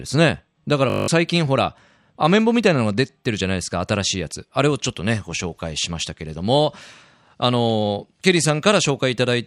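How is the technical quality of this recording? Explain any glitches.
The recording has one clear glitch, a system hang loop from 0.90 to 1.08 s. A 20 ms fragment of the speech repeats nine times in a row, so the sound collapses into a steady buzz at 50 Hz. This happens when the playback or capture system stalls while the audio hardware keeps cycling through its ring buffer, which here points to a buffer of about 20 ms. When the stall clears, about a fifth of a second of the original audio is missing.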